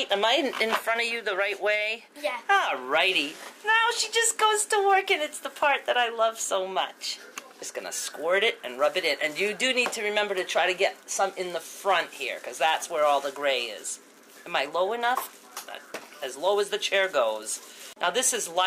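No technical faults are audible.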